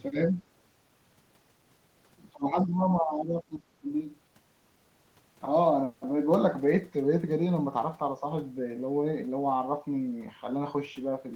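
From 0.13 to 0.4 s, the speech dips slightly for a brief moment, only a few decibels. From 2.33 to 3.89 s, it drops much harder, by roughly 20 dB, and stays down for most of that second and a half. Both are speech suppressed in double talk. The likely cause is an echo canceller meeting both sides talking at once. It could not tell this talker from loudspeaker echo, so it pulled the level down.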